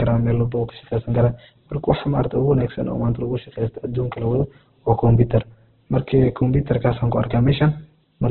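Throughout, the speech sounds rough, grainy and band-limited, likely from heavy Opus compression at a bitrate near 8 kbps. A spectrogram shows nothing above 4.4 kHz and noisy, speckled bands below.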